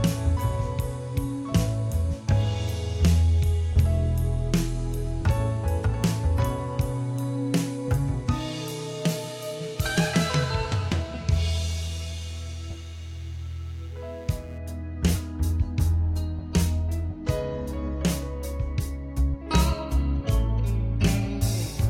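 Computer activity noise: load swings in the processor, graphics card or mouse disturbed the ground the audio circuit shares, so from 11.80 to 14.58 s a faint buzzing chirp pulsing around 150 times a second, roughly 35 dB below the sound, rides underneath it.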